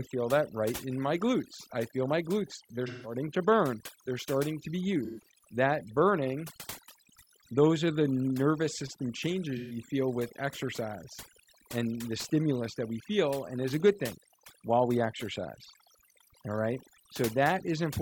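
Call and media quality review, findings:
Overdone noise removal, whole clip, noise-reduction stage. Suppression set far too aggressive: bands near the noise estimate are cut to almost nothing, taking low-level speech detail with them. Result: background pulled down and broken up into twinkling specks.

AAC frame loss with concealment, decoder. Lost frames rebuilt from the last good spectrum, giving smeared, phasey patches. 2.87–3.14 s, before "to burn", about 171 ms missing, fits four frames. 5.04–5.30 s, after "starting to be", about 128 ms, fits three frames. 9.57–9.76 s, between "are the nervous system" and "feel with exercise and", same length.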